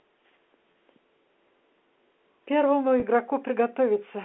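Packet loss with pitch repetition occurs at 0.72 to 0.74 s and again at 3.00 to 3.02 s. Each gap is about 20 ms, which fits two lost 10 ms packets. The receiver bridges each hole by replaying the last pitch cycle of the speech, so both spots sound like a brief, slightly held buzz before normal speech resumes. The gaps are too short to fade into silence. The narrow band of the G.711 telephone line is audible throughout.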